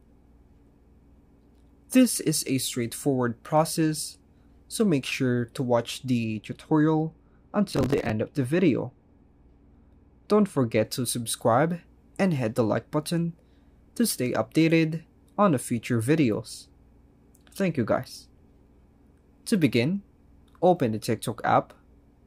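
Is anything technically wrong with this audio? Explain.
Yes. From 6.24 to 10.85 s the sound turns dull and muffled, with the treble sloping smoothly away to about 10 dB down at 10 kHz relative to 1 kHz. This is de-emphasis applied wrongly: a high-frequency cut meant to reverse pre-emphasis was applied where no boost existed, or was applied twice.

Inside that stretch, from 7.71 to 8.10 s, a gritty burst of crackle tears across the sound. This is processor overload crackle. The processor repeatedly missed its deadlines, likely on buffers of about 10 ms, and each miss replayed old audio with hard edges.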